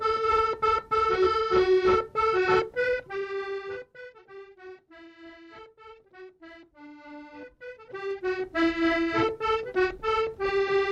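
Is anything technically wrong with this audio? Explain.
Yes, there is zipper noise in two places. From 2.90 to 4.18 s the level is cut by roughly 20 dB, and from 7.34 to 8.62 s it is brought back up by a similar amount. Both moves are applied in unsmoothed 1 dB jumps at about ten steps a second, so each jump produces a small click. While the level travels, the sound carries a steady ticking, zipper-like texture that stops once the change is complete.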